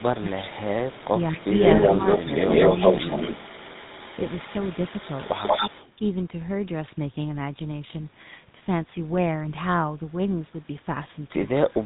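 A speech recording carrying tandem speech coding throughout: the audio sounds as if it passed through G.726 at 40 kbit/s, G.711 mu-law and then GSM full rate, with two lossy speech coders stacked so the second re-encodes the first's errors. The result is rough, muffled and warbly, with nothing above 3.8 kHz. From 0.0 to 5.92 s an echo leak is audible: a copy of the voice trailing by 187 ms, about 5 dB relative to the direct speech, likely from a loudspeaker-side echo canceller failing to remove the acoustic return. Speech suppressed in double talk occurs at 0.0 to 0.58 s and 1.04 to 1.45 s, where the voice dips by roughly 10 dB for a few hundred milliseconds in total. This is probably the canceller attenuating the talker while it cannot separate the voice from the echo.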